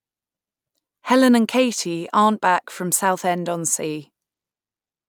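No technical faults can be heard anywhere in this speech recording.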